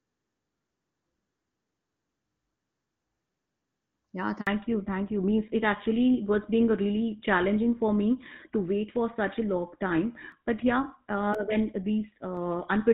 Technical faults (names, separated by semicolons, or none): handover gap; fallback to narrowband; periodic USB or driver dropouts